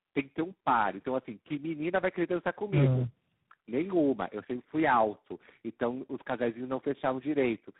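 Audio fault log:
throughout: tandem speech coding. The speech has been decoded and re-encoded by three speech coders in series, each working on the already damaged output of the one before, so their errors accumulate rather than staying separate. The result is rougher, more muffled and more warbly than any single coder would produce, with nothing above 3.8 kHz. The character fits a chain of GSM full rate, G.729A and G.726 at 24 kbit/s, joined by G.711 links.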